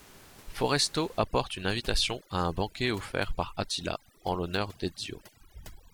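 Speech with overdone noise removal from 1.19 s to the end. The background drops and breaks up into twinkling specks. Unlike ordinary room noise, which stays as background noise about 22 dB below the speech before 1.19 s, this is a denoiser set too strong. It switches individual frequency bands off and takes quiet parts of the voice with them.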